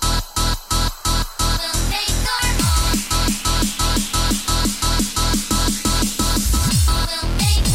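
No technical faults are audible anywhere in the recording, so there is nothing to flag.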